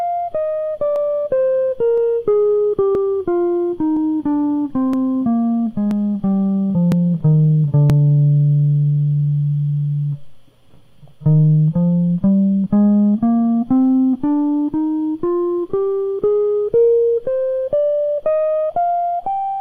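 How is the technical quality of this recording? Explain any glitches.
The music carries a repeating glitch from overlap between stream segments, once per second through the first eight seconds. Skips land at 0.96, 1.98, 2.95, 3.97, 4.93, 5.91, 6.92 and 7.90 s, each removing about 30 to 40 ms. Adjacent one-second segments claim overlapping time, and the player discards that overlap even though the audio there was not duplicated, so the waveform jumps ahead. Each is heard as a tiny forward skip in the music. Unlike a dropout, there is no silent gap.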